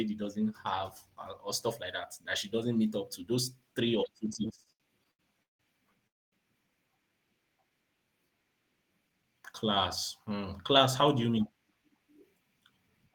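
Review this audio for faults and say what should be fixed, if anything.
From 4.33 to 5.62 s the speech drags and stutters through eight brief holds, the longest 163 ms, filling about a third of that stretch. These are repeated stalls (stutter): packets arrived late, so the jitter buffer kept emptying and the receiver stretched the last sound until it could continue. A deeper adaptive jitter buffer and steadier network delivery would prevent this.

At 6.07 to 6.35 s the audio stops for 248 ms, nearly all of it silent, then resumes with nothing lost. This call audio freeze was likely caused by packets held up in transit. Prioritising the voice traffic (QoS) on the path would prevent it.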